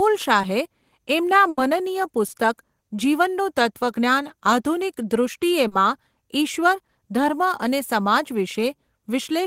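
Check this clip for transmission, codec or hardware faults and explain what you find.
Two kinds of network fault are audible, both from lost packets. Short concealed packet loss occurs at 0.41 to 0.45 s, 2.27 to 2.31 s and 5.67 to 5.73 s. Those stretches arrived too late, so the receiver extended the preceding speech to bridge them. The first two patches last 20 ms and the third 40 ms. Each is heard as a brief smear or wobble, and a short consonant may drop out.

A burst of packet loss runs from 1.49 to 1.59 s. About 80 ms of consecutive audio never arrived in time. The receiver stretched the last sound while fading it down. This gives a held buzz or fading hiss, and then the speech jumps ahead with that part missing.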